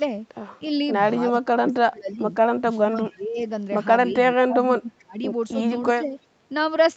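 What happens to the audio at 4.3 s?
From 4.33 to 5.20 s the speech is chopped and pulled down by up to about 25 dB for most of that span. This is speech suppressed in double talk, likely an echo canceller treating overlapping talk as echo. The waveform shows ragged troughs, and the spectrogram shows broken gaps.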